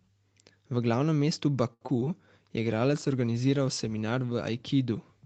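From 1.73 to 2.08 s, just after "glavnem mestu", there is repeated packet loss with a robotic sound. Four short holes open in the speech. The receiver fills each one by stretching the last sound. About a third of this span is patched, and the longest gap is 77 ms. The result is choppy, with pieces missing.

From 2.56 s to 5.21 s, a call bitrate drop sets in. The encoder is given fewer bits, which fits a fall from 32 to 16 kbps. The speech turns coarse and watery. It stays at its roughest for about 1.8 s.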